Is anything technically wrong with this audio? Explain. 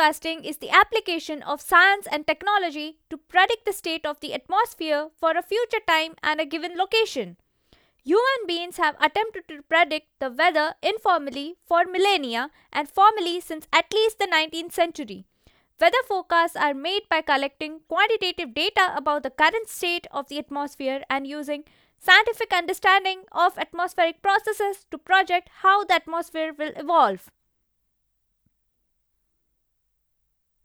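No, nothing is technically wrong with this audio.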